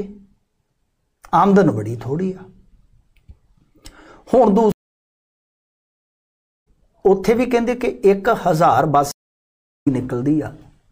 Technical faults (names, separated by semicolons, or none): stream reconnect